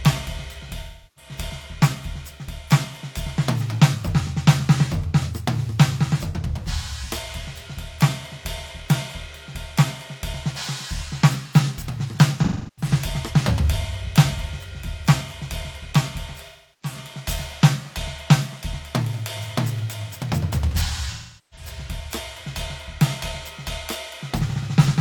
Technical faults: AAC frame loss with concealment

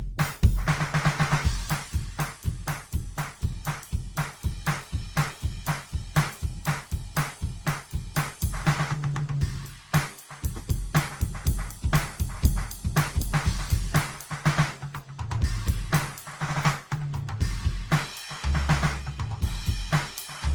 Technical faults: generation loss

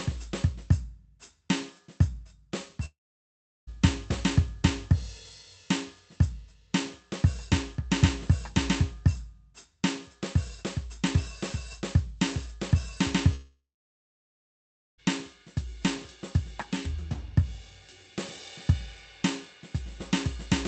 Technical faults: long network dropout

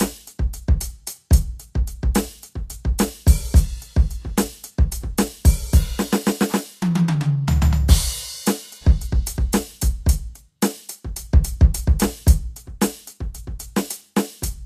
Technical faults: Vorbis compression

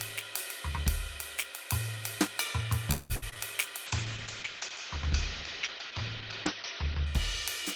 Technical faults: repeated packet loss (robotic sound); call bitrate drop

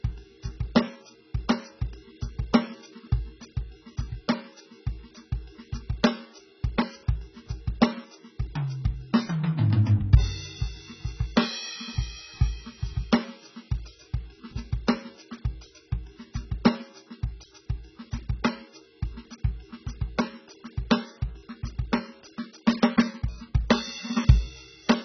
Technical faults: AAC compression

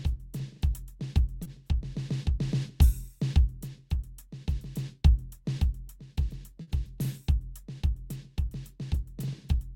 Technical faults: short concealed packet loss; burst of packet loss

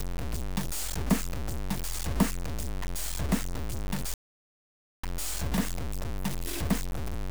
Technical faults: low bit depth without dither; playback stall

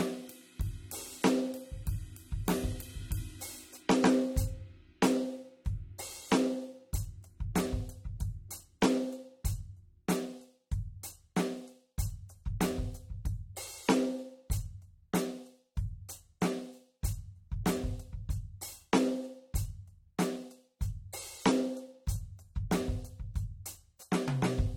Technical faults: AAC compression

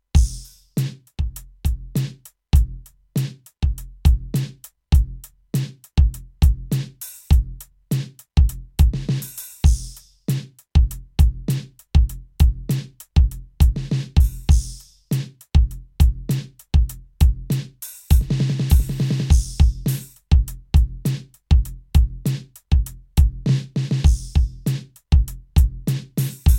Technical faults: none

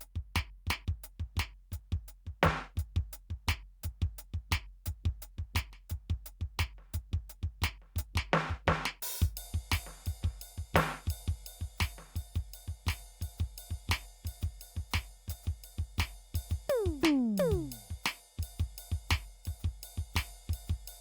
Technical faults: none

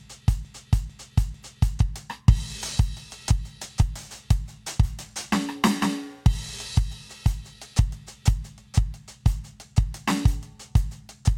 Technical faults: broken-record loop

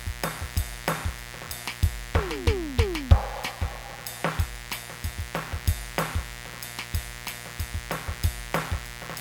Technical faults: mains buzz

